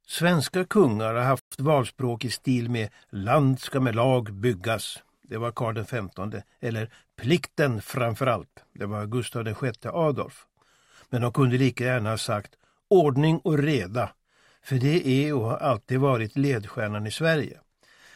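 At 1.39 s the sound cuts out mid-flow. Silence holds for about 120 ms, until 1.52 s. Then the audio resumes. This is a playback stall. The likely cause is that the player ran short of buffered data, or its output thread was held up. The gap is simply dead air. It is long enough to register as a clear hiccup.

From 1.52 s to 2.32 s the audio runs fast. It plays at about 1.15 times normal speed. The pitch stays where it should be. This is time-compressed catch-up. The player is working off the delay built up by the stall. It trims tiny slices out of the signal and cross-fades across each cut. The result sounds hurried for just under a second. Normal pacing returns at 2.32 s.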